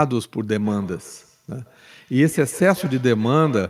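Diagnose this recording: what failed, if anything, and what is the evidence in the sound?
The failure is in call processing: a feedback echo between two devices. From 0.56 s to the end of the clip at 3.69 s, the speech comes back as a repeat roughly every 150 ms. The returning sound peaks at about 19 dB below the speech. Two devices in the same room share the call. One plays the other's audio, and that microphone picks it up again. Each echo canceller only removes its own playback, so the loop survives.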